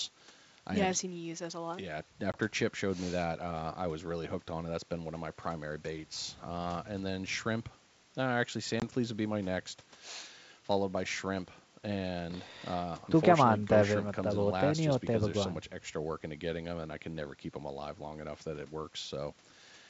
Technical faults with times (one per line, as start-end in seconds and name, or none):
2.32-2.38 packet loss on an ADPCM call
8.80-8.83 packet loss on an ADPCM call